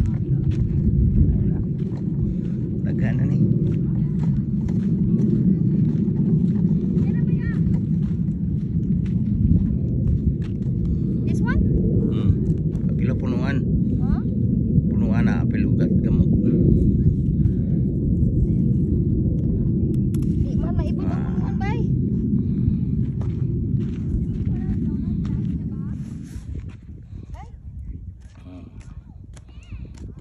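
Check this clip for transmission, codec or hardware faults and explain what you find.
No transmission or hardware faults detected.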